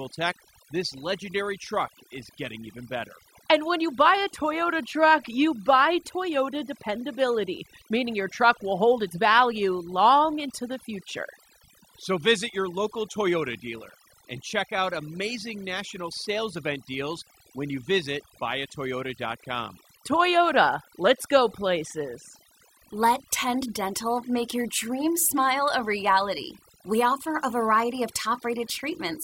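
A speech recording with overdone noise removal running throughout: the background between phrases drops and breaks up into twinkling specks, because the denoiser, set too strong, switches off individual frequency bands near its noise estimate and takes quiet speech detail with them. Unlike a low-pass filter's uniform dullness or a low-bitrate codec's swirl, the loss follows the noise floor.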